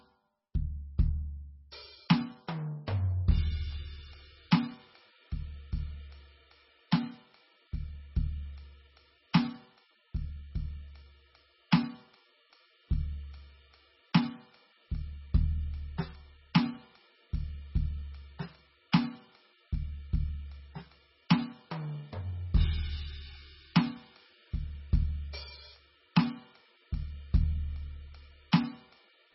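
From start to finish the music sounds dull and watery, with nothing above 5.6 kHz, so the top end simply stops. Sustained parts swirl and warble, and bright sounds carry a metallic chirp while attacks smear. The likely cause is heavy MP3 compression at a very low bitrate, around 16 kbps. Starved of bits, the encoder cuts the treble at a fixed point and drops weak frequency lines that flicker on and off between frames.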